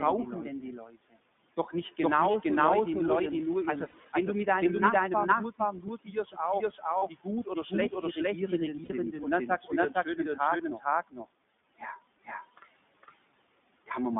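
Throughout the clip, the whole signal is mixed in twice. The likely cause is a second capture path or an edit holding two copies out of step. A full-band copy trails about half a second behind at roughly the same level, with no decay or room colour, so every syllable arrives as a hard double.

The audio also passes through the iLBC codec. Its line band runs from 150 Hz to 3.6 kHz, so the top of the sound is cut off. The speech comes through clear but noticeably rough and synthetic, which fits iLBC's 15.2 kbps mode with 20 ms frames.

From 0.78 to 1.16 s, the noise suppressor mistakes speech for background and pulls it down by up to about 18 dB. Sounds are swallowed along with the room noise, which sits about 21 dB below the speech.

Lost iLBC frames come next. From 2.32 to 2.36 s, and from 3.90 to 3.96 s between "die nur ihren also" and "wenn du mit deinem", the decoder fills 20 ms and then 40 ms gaps by repeating the last pitch cycle with noise. 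Each sounds like a short buzzy held vowel, and the speech recovers at once.

Speech cut by the noise suppressor returns from 5.59 to 8.17 s, dipping up to about 14 dB. Soft consonants and word endings turn faint. Inside that stretch, 6.98 to 7.04 s loses 40 ms of frames, giving another brief buzz.

From 8.84 to 8.91 s, a 60 ms loss produces a longer breathy hold.

The suppressor strikes again from 9.47 to 11.25 s, dipping up to about 17 dB, and from 11.8 to 12.64 s, dipping up to about 13 dB. Quiet phrases and endings sound faint and sunk into the background.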